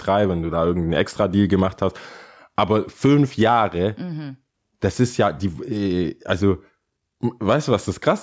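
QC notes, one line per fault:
Throughout: gain pumping. The gain swings by about 10 dB, pulled down under each loud passage, flattening the difference between loud and soft parts. This is likely an input gain set too high, with a fast limiter clamping down on every peak.
0.96–1.30 s: CD scratch ticks. Right after "wenn du da irgendeinen", three short ticks are heard, the longest under a millisecond. They are bursts of damaged data that error correction could not rebuild, once per disc revolution, so the player interpolated or muted those samples.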